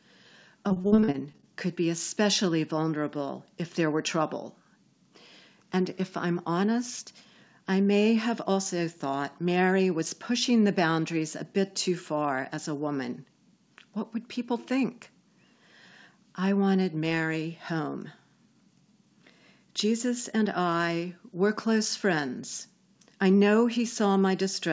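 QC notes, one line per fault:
0.68–1.45 s: repeated packet loss (robotic sound). About a dozen short dropouts, the longest about 41 ms, are each patched by extending the preceding sound, so roughly a third of the stretch is filler. Speech turns choppy right before "could be especially vulnerable".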